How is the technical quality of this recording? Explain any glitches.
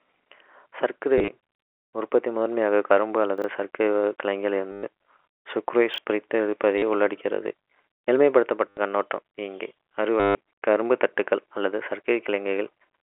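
The recording has two recurring faults: five bursts of repeated audio and two brief order scrambles. All of it sits within the narrow 300 Hz to 3.4 kHz telephone band of the G.711 coding.

Packet loss with last packet repeated occurs at 1.18–1.28 s, 4.72–4.83 s, 6.78–6.82 s, 8.70–8.77 s and 10.20–10.35 s. Missing packets were filled by replaying the previous one. The loops suggest 10 ms packets, so each run gives a robotic stutter buzzing near 100 Hz. The worst is the 150 ms run at 10.2 s, and the first is scattered, with runs no longer than 30 ms. On a spectrogram these runs appear as repeated vertical stripes. The waveform shows identical short segments tiled together.

Chunks out of order occur at 3.38–3.44 s, where a 20 ms chunk plays two chunks late, and at 5.94–5.98 s, where one plays a chunk late. The sound is briefly jumbled. The spectrogram shows sharp vertical edges where the chunks join, and the waveform shows matching discontinuities.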